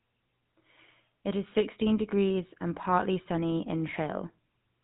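GSM full-rate codec damage runs through the whole speech clip, from start to finish. The codec models the vocal tract as a filter and excites it with a sparse train of regularly spaced pulses, keeping only one excitation sample in three, so the voice comes out with a plainly audible buzzy, gravelly roughness. Nothing survives above 4 kHz, leaving a narrow telephone band. The degree of coarseness fits the 13 kbps full-rate mode.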